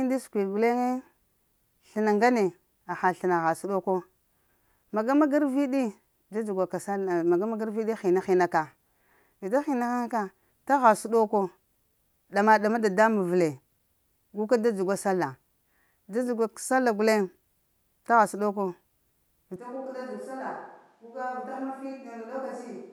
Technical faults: switch to a distant microphone

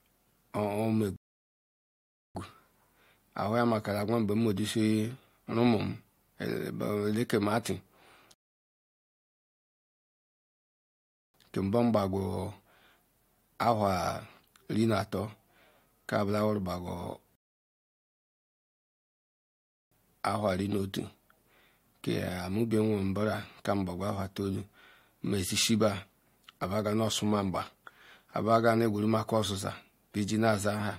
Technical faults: rebuffering stall

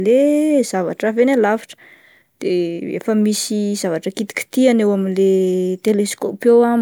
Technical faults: none

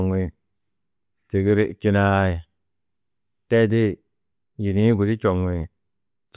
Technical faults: none

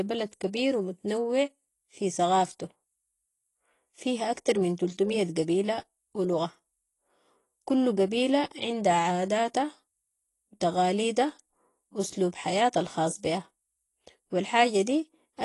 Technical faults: AAC compression

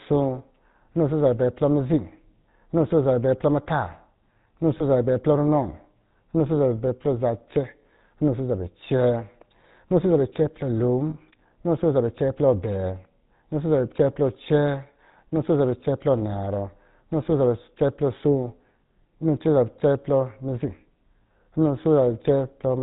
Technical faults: GSM full-rate codec; lost GSM frames

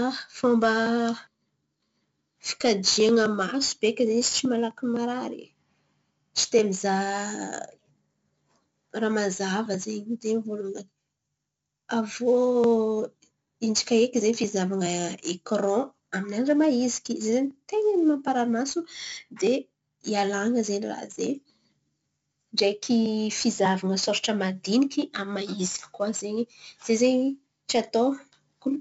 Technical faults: 4-bit ADPCM compression

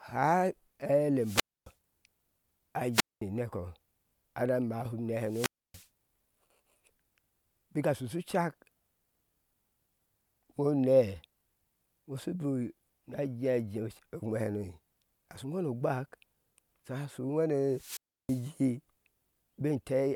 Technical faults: wireless microphone squelch dropout

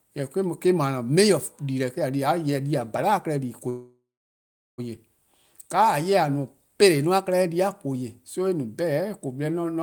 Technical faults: call audio freeze

